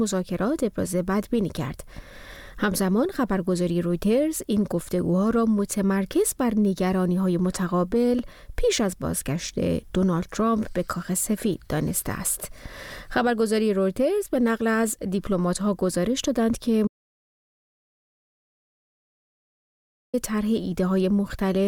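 At 16.87 s the sound cuts off abruptly in mid-flow and stays gone until 20.14 s: an audio dropout to silence lasting about 3.26 s. The input was likely lost upstream, through a disconnected device, a failed link or an accidental mute, while recording continued and filled the gap with silence. No room tone remains. The waveform collapses to a flat line, and the spectrogram shows a clean black block with hard vertical edges at both ends.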